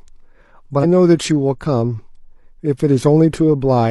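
At 0.79 s the speech is broken by a brief glitch lasting about 0.06 s, until 0.85 s. This is damaged data in a compressed stream. A short run of the encoded data is corrupt. The decoder cannot read those frames correctly. It loses sync and hunts for the next valid frame header. What comes out is a glitch rather than clean audio. Then normal decoding picks up again.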